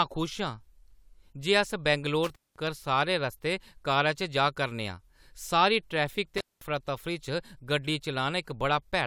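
Speech with intermittent contact. The sound cuts out twice, at 2.24–2.67 s and 6.37–6.62 s, each gap about 200 ms. Crackle marks the edges, with faint hiss between, as a loose plug briefly opens.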